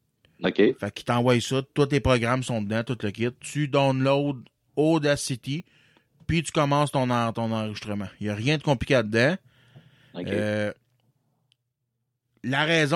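The capture side most likely fell behind, so dropped buffers (overruns) cut out short stretches of the speech. At 0.45 s about 20 ms is lost, then about 10 ms at 5.6 s and again at 7.77 s after "tu commences ton ton", each heard as a jump in the sound.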